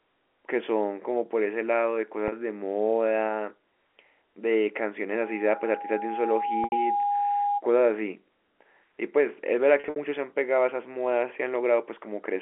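At 2.28 s, packet loss with pitch repetition bridges a 40 ms gap, which fits two 20 ms packets. The receiver repeats the last pitch period, so the sound holds briefly with a buzzy edge. On a spectrogram the harmonics run flat and unchanging across the gap.

From 5.14 to 7.62 s, a loudspeaker feedback squeal sets in. The microphone picks up its own loudspeaker, and at 816 Hz the loop gain tops one. The tone swells over roughly one and a half seconds until it is about as loud as the speech. A spectrogram shows a single bright horizontal line at 816 Hz. The waveform grows into a steady sinusoidal envelope.

At 6.64 s, under the squeal, 80 ms are lost. The repeated period fades toward silence before the sound cross-fades back in.

At 9.8 s, 120 ms are lost in scattered runs across 160 ms, the longest 60 ms. This gives several stuttering held fragments, with repeated blocks and dips visible in the waveform.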